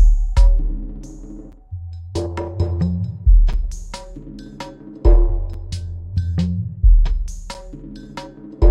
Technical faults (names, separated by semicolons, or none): gap between chunks